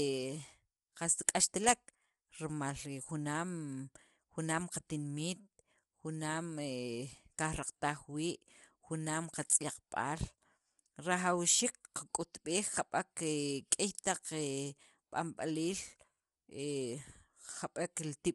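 Likely low-delay AAC compression (AAC-ELD) throughout, fitting about 32 kbps: the speech sounds plainly rough and grainy, with nothing above 11.6 kHz.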